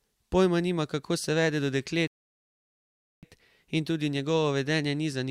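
At 2.07 s, right after "kako se vede do", the speech drops into silence until 3.23 s: a rebuffering stall. The player ran dry of downloaded audio and waited for more, then picked up exactly where it left off. Nothing's missing, just about 1.15 s of dead air added.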